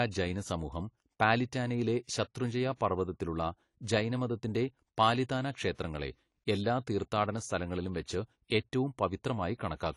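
AAC compression runs from the start of the speech to its end, and the dull, smeared quality is plainly audible. The likely cause is low-bitrate AAC-LC coding, and the damage fits something around 32 kbps. At that rate the encoder cannot afford the upper spectrum, so nothing is left above 11.5 kHz. With too few bits for the remaining bands, their detail is coarsened, and sibilants and held sounds take on a fizzy, warbling texture.

Pre-echo appears at 2.76 s, right after "ജൈന സമൂഹം പാലിറ്റാനയിലെ ശത്രുഞ്ജയ" and just before "പർവതത്തിലുള്ള ജൈനമതത്തിന്റെ പാലിതാന". It returns at 5.74 s, after "ശത്രുഞ്ജയ പർവതത്തിലുള്ള ജൈനമതത്തിന്റെ പാലിതാന". Each time a sharp onset sits late in a transform block, and the coding noise meant for the loud attack spills across the quiet moment before it. The result is a short hiss leading the onset by 51 ms and 41 ms, and the attack itself sounds softened.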